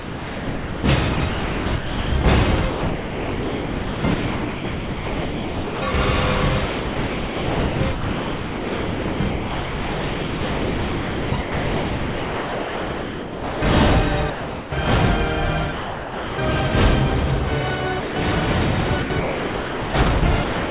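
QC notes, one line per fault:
0.00–5.94 s, 6.66–13.62 s and 19.02–20.70 s: sound chopped by the voice detector. The sender's detector keeps flipping between sending and muting. Most of each stretch is comfort noise: about 4.7 s, 6.6 s and 1.1 s respectively. The likely cause is the sender's voice detector switching between sending and not sending.
14.30–14.72 s, 15.72–16.38 s and 18.00–18.16 s: sound dropped by the voice detector. Each gap lasts 0.42 s, 0.66 s and 0.16 s. The sound stops and steady comfort noise takes its place. The sound returns when the detector fires again. The likely reason is that the detector mistook quiet passages for background. Under all of this, the call path's band stops at 4 kHz, which fits G.711 A-law.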